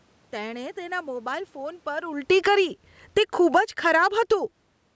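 From 2.15 s to 4.2 s the automatic gain is falling: the control judged the input too loud or its background too strong and pulled its gain down by about 14 dB, so voice and background sink together. On a waveform the envelope tapers steadily, and a spectrogram darkens across the whole band up to 8 kHz.

Within that stretch, automatic gain rising appears from 2.55 s to 3.0 s, lifting level by about 7 dB; a second rise runs from 3.83 s to 4.72 s, about 8 dB, chasing an input that dropped about 22 dB. Background swells with the speech, visible as a ramping envelope and brightening noise floor.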